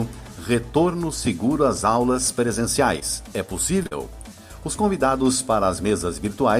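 The audio has three short concealed packet losses. The first runs from 2.99 to 3.03 s. The next two fall back to back, from 3.83 to 3.87 s and then to 3.93 s. About 20 ms, 20 ms and then 40 ms of audio never arrived in time. The decoder bridged each gap by extending the preceding sound and then blending back into real audio. Each one is heard as a brief smear or wobble. The second spot sounds longer because its two gaps join.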